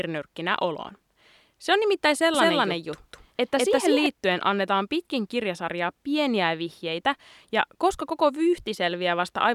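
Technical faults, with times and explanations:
2.34–4.06 s, doubled audio track: after "on nimittäin" an equally loud, dry copy trails about 200 ms behind, then cuts off abruptly, likely from a slower second capture path.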